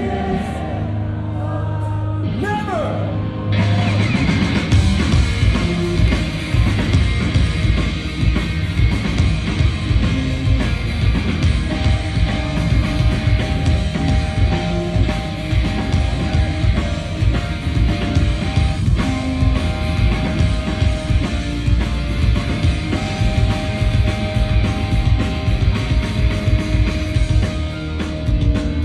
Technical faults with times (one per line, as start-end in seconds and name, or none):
none